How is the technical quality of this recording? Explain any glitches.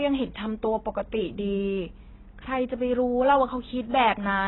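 The quality is poor throughout, because of heavy AAC compression. For the whole clip the speech has nothing above 4 kHz, leaving it dull and muffled, with a smeared, warbling texture on sibilants. This is likely an AAC-LC encode squeezed to about 16 kbps, forcing the encoder to drop high bands and coarsely quantise the rest.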